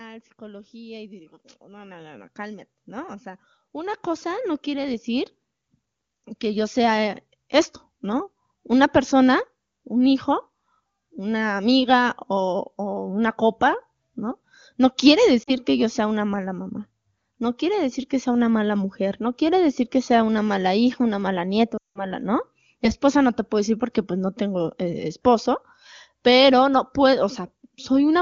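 Automatic gain rising three times: the gain control judged the input too quiet and raised its gain, so speech and background swell together by about 9 dB from 0.38 to 2.79 s, about 5 dB from 3.72 to 5.36 s, and about 4 dB from 6.4 to 7.26 s. Then come lost AMR speech frames: failed frames in this AMR wideband (HD Voice) call made the decoder repeat its last settings with falling gain. Two frames (40 ms) drop out at 15.43 to 15.51 s, just before "que yo sea una". Nine frames (180 ms) fall to near silence at 21.77 to 22.05 s, right after "hija una mala nieta".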